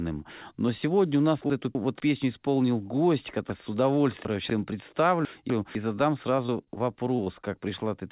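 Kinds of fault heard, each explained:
Chunks out of order: Three times, at 1.5 to 2.0 s, 3.5 to 4.5 s and 5.25 to 5.75 s, quarter-second blocks of the speech play in the wrong sequence. In the first and last, a block arrives one slot late. In the middle span it arrives three slots late. Each shuffle produces a jumbled moment bounded by hard joins. Unlike packet loss, nothing is missing or synthesised. The audio is all present but misplaced.
Repeated packet loss (robotic sound): From 6.36 to 7.45 s, eight short holes, the longest about 27 ms, are patched by stretching the preceding sound. Together they take up roughly 160 ms, about 14% of that stretch. The rapid succession of fills gives a choppy quality with pieces missing over narrowband audio that stops at 4 kHz. Unlike reordering, real material is lost and replaced with smeared continuation rather than being rearranged, and no block-sized displacements are heard.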